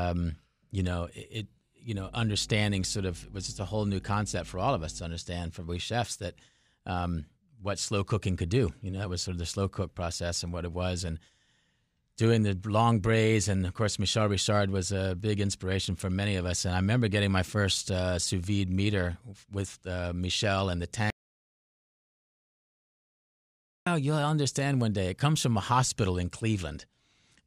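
From 1.96 to 5.06 s, mains hum sits under the speech: a steady 50 Hz tone with low harmonics, roughly 20 dB below the speech, leaking in from the power line. Unlike rumble or wind noise, it holds one fixed pitch rather than wandering.

At 21.10 s there is an audio dropout to silence: the speech cuts off mid-flow and returns at 23.87 s, losing 2.76 s. The gap carries no room tone at all, which sets it apart from a natural pause. The likely cause is lost input while recording continued.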